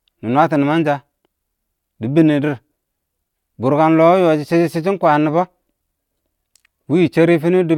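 Nothing in this recording of speech stands out as a technical fault; it just runs along without any glitch worth pointing to.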